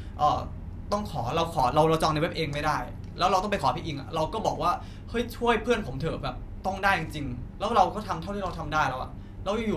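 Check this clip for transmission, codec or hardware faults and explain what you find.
Nothing stood out on listening to this speech recording.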